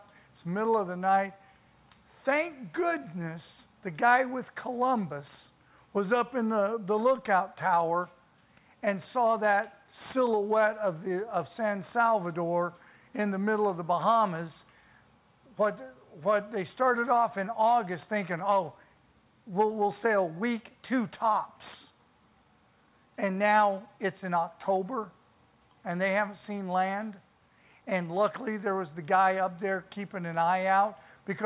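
No technical faults can be heard anywhere in this audio.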